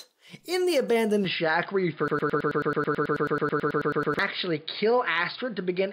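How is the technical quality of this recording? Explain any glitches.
The recording has two faults: a drop in bandwidth partway through, and a stretch where a short fragment repeats.

At 1.25 s the sound turns dull and boxy and stays that way to the end, with nothing above 5 kHz and a new noise floor about 35 dB below the signal. The level stays roughly unchanged and there is no gap at the change. This points to an input switched to a poorer device, likely a narrower-band microphone or a headset call profile.

From 2.08 s to 4.19 s a broken-record loop plays. A 0.11 s piece repeats back to back 19 times, giving a rapid, mechanical stutter, and the audio that belonged in those two seconds is missing. The likely cause is a stalled player, encoder or stream that kept resending its last buffered fragment.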